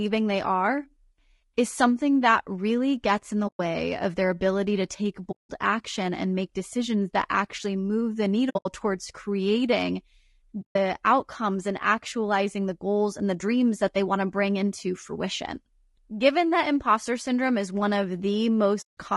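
All the way through, the speech sounds rough and grainy, with noise filling the gaps between harmonics and a thin, synthetic top end. That's most likely low-delay AAC compression (AAC-ELD-style short frames), and the damage fits a low bitrate around 32 kbps.

On top of that there's AAC frame loss with muting: soft-edged holes where the decoder zeroed missing frames and the overlapping windows faded out and back in. They fall at 3.47–3.60 s, 5.31–5.51 s, 8.49–8.66 s (broken up, longest gap roughly 70 ms), 10.61–10.76 s and 18.81–18.97 s.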